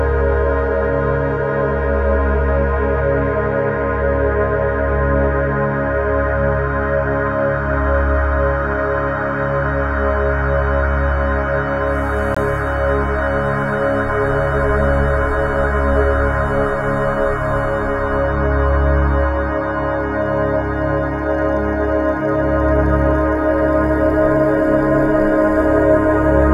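At 12.35 to 12.37 s there is a block of digital silence: 20 ms of samples replaced by zeros, cutting in and out with no fade. Unlike a softer dropout, the hard edges give a sharp short hole rather than a muffled dip.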